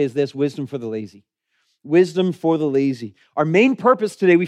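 Two sharp clicks cut through this speech. The first comes at 2.75 s, right after "for the". The second comes at 3.69 s. Each is a single thin tick with no gap in the sound. The likely cause is dropped samples. A handful of samples, well under a tenth of a millisecond, seem to go missing. The waveform then jumps straight to a later value. That sudden step is what makes each click.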